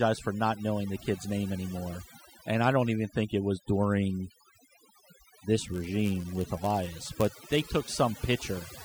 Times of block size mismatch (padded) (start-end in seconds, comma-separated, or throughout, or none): 5.60-7.62